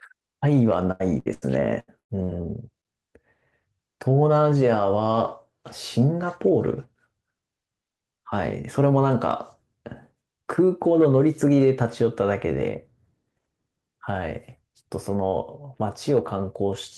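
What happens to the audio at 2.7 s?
At 2.7 s you're near the tail of a stretch of repeated packet loss (robotic sound) running from 0.91 to 2.86 s. Seven gaps, the longest 94 ms, each get patched by stretching the previous sound, so the speech turns choppy with pieces missing.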